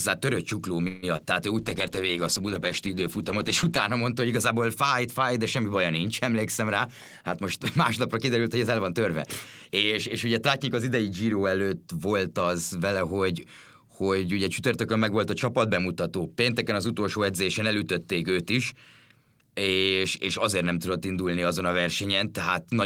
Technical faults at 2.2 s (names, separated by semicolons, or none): call bitrate drop